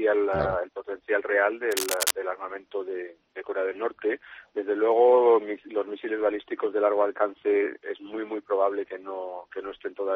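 From 1.71 to 2.11 s there's a burst of cable scratch noise: dense, ragged scratching laid over the sound, sitting only a little below it in level. It's likely a worn cable or connector being moved, with its contact resistance jumping around briefly.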